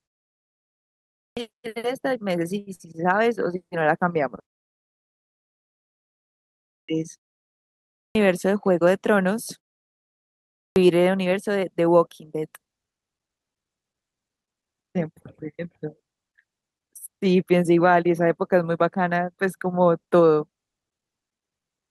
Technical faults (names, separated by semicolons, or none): clipped start after a pause; short stall from a late packet; jitter buffer speed-up